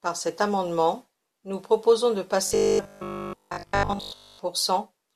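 From 2.47 to 4.39 s, right after "amendement nous proposons de", the speech takes on a robotic sound from repeated short buffers: a rigid metallic buzz at 50 Hz, likely from a 20 ms chunk being replayed for most of that stretch while new audio arrives too seldom. Unlike dropouts, there are no silent gaps, and the fixed pitch sets it apart from codec warble.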